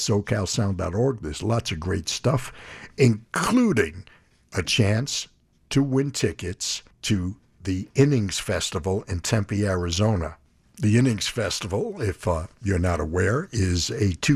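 No technical faults can be heard anywhere in the recording.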